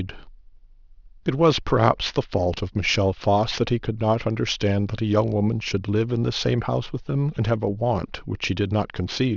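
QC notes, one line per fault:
Throughout: aliasing. Sibilants sound gritty and metallic, folding back below 6 kHz, roughly 20 dB down, which fits an unfiltered drop from 24 kHz to 12 kHz.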